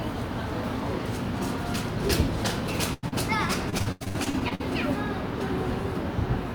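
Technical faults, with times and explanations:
2.93 to 3.05 s, burst of packet loss: About 100 ms of consecutive audio failed to arrive in time. The receiver stretched the last sound over roughly 92 ms and let it fade, producing a held, dying buzz or hiss before the sound jumps ahead with that stretch missing.
3.09 to 3.14 s, short concealed packet loss: Just after the burst, another 40 ms went missing. About 32 ms was patched by extrapolating the preceding sound and crossfading back into real audio, which is heard as a brief smear or wobble.
3.70 to 4.62 s, repeated packet loss (robotic sound): Packets kept going missing across this span, leaving eleven gaps totalling 360 ms, the longest 87 ms. Because each hole was synthesized from the sound before it, 41% of the span is invented, which sounds choppy, with fragments gone.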